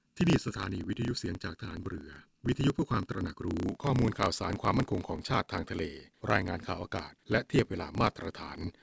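From the start to 3.66 s the speech has channel delay (comb filtering). One channel trails the other by roughly 0.7 ms, and when the two are summed to mono the shared content cancels at regularly spaced frequencies. The first notch sits near 700 Hz, with further notches about every 1.4 kHz above it, so the sound is hollow and phasey. On a spectrogram these show as fixed horizontal dark bands that vanish after 3.66 s.

A block size mismatch (truncated) runs through the entire clip. One stage writes longer blocks than the next reads, which fits 512-sample blocks being written, and the tail of each block is dropped. That produces a steady buzz at 33.3 Hz, the block rate. The speech also runs 1.07 times fast while keeping about its normal pitch. The waveform shows a discontinuity every 30 ms, and the spectrogram shows these as evenly spaced vertical lines. Throughout, the call path leaves nothing above 8 kHz, a clean ceiling across the top of the spectrogram.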